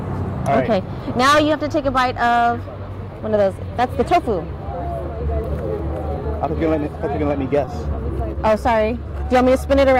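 Short concealed packet loss occurs three times in quick succession, at 7.65 to 7.69 s, 7.95 to 7.99 s and 8.33 to 8.37 s. Each time, 20 ms of audio arrived too late or not at all, and the receiver covered the hole with 20 ms of synthesized continuation, extending the preceding sound and then crossfading back into the real signal. Each one is heard as a brief smear or wobble.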